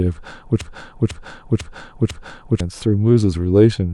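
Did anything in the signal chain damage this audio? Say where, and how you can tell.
Yes. From 0.61 to 2.60 s, one 498 ms fragment of speech repeats exactly, four times back to back: a broken-record loop. This points to a stalled playback buffer, likely re-sending its last block, so the audio due in that span is lost.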